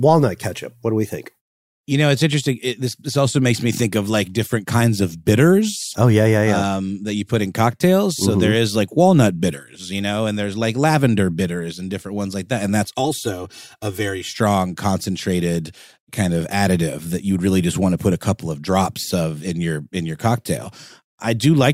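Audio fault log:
12.85–14.34 s, channel delay (comb filtering): one channel arrives around 3 ms late and is summed to mono, so shared content cancels at evenly spaced frequencies starting near 200 Hz, making the speech sound hollow and phasey until just before "concentrated kind of additive".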